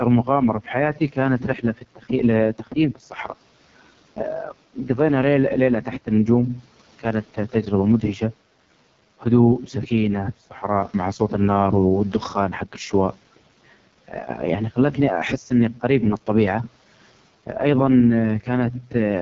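The whole clip passes through the AMR wideband (HD Voice) codec, and the damage is heavy. Nothing is present above about 7.3 kHz. The speech has the rough, raspy texture of the codec's lowest mode, and the sound fits a rate of about 6.6 kbit/s. At that rate, the pulse-driven vocal tract model has too few bits to follow the speech accurately below 6.4 kHz. The top band above that point is only shaped noise, which adds a hissy edge.

Early in the clip, the noise suppressor cuts speech three times, at 0.94 to 1.17 s, 1.39 to 2.1 s and 2.95 to 3.29 s. Each time it treats part of the speech as background and pulls it down along with the room noise. That room noise sits about 26 dB below the speech. The deepest drops are about 11, 12 and 11 dB. Only part of each span is affected: roughly a sixth, a third and a tenth of a second. In those moments, the affected speech sounds swallowed and faint.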